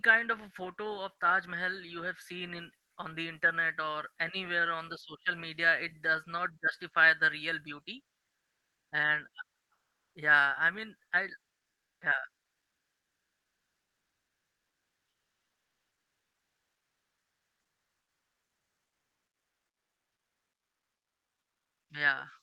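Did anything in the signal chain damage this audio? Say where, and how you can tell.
Yes. Three pauses in the speech lose their real background and fill with a flat, featureless hiss: at 8.35 to 8.91 s, right after "justify the real beauty"; at 9.73 to 10.13 s, just before "yeah I mean I"; and at 11.69 to 12.01 s, just after it. Each patch is quieter than the surrounding room, by about 9, 3 and 5 dB. This is comfort noise in place of the background, likely from Opus discontinuous transmission in the call codec stage muting the sender during silence.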